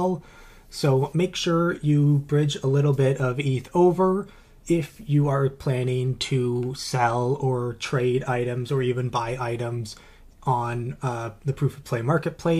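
No technical faults occur anywhere in the audio.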